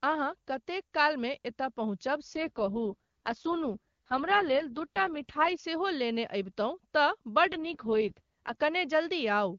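Just after "एतय पहुँचब", from 2.33 to 5.60 s, and again from 7.46 to 8.56 s, the speech turns rough and synthetic, with no gap or narrowing of band. This is an AMR rate drop: the sound points to the wideband codec falling from 23.85 to 6.6 kbit/s on a weak link.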